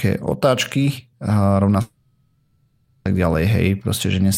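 Speech, where a likely long network dropout stops audio arriving after "otáčky rovná" at 1.81 s; the receiver fills the gap with a fading buzz or hiss until speech resumes at 3.07 s, about 1.2 s lost.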